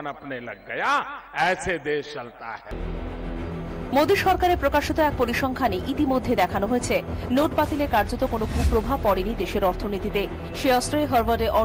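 From 7.42 s onward, a call bitrate drop, fitting roughly 64 down to 22 kbps, leaves the sound coarse and muffled, with no gaps, unlike packet loss.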